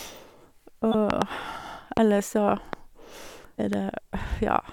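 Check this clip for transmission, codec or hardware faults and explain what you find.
Two kinds of fault are present: compressed frames skipped twice, and loud pops at four points.

Compressed frames skipped, at 0.91 to 0.95 s and 3.55 to 3.59 s: the decoder never played some compressed frames, so the speech lurches forward, by about 20 ms the first time and about 100 ms the second. Unlike a dropout, there is no gap of silence. Unlike a pop, material is actually missing.

Loud pops, at 1.10 to 1.24 s (a pair, about 20 dB above the speech) and single pops at 1.97 to 1.99 s, 2.73 to 2.75 s and 3.73 to 3.75 s (about 15 dB above): these sound like sharp thumps laid over the speech, likely from a voltage step or pulse such as a plug, switch, static or driver glitch, shaped by the following circuitry. Speech carries on intact underneath, which separates them from the skips.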